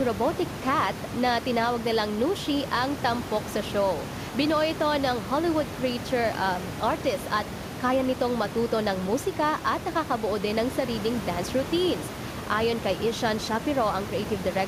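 Listening through this speech recording, nothing stood out as a technical problem, with only a room noise sitting about 10 dB below the speech as part of the recording itself.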